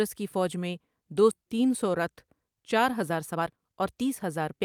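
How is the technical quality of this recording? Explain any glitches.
The recording has two timing faults: a skip ahead near 1.3 s and a jitter buffer speed-up over most of the final second and a half.

At 1.31 to 1.33 s, just after "کی فوج میں دو", playback makes a skip ahead. About a second of audio is gone, with no fill inserted. That stretch was dropped while later audio was already queued, either in transit or by an overflowing jitter buffer, so the sound on either side is spliced almost directly and the continuation arrives abruptly.

From 3.02 to 4.54 s the jitter buffer speed-up is audible. The buffer was holding more audio than its target, so the receiver trimmed short pitch-period pieces repeatedly to bring the delay down, removing roughly a third of a second in total. The speech runs at about 122% speed with its pitch unchanged, which makes this passage sound noticeably hurried.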